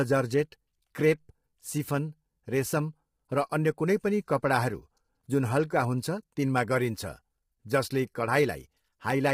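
From start to finish the speech sounds rough and grainy, with a hiss filling the spaces between the harmonics and nothing above 15.6 kHz. The damage is heavy and points to a low bitrate around 24 kbps, likely from low-delay AAC compression. Its low-delay frames code only about 500 frequency lines, and at this bitrate noise fills in between the harmonics. Simple band-limiting would remove the top without adding any of that roughness.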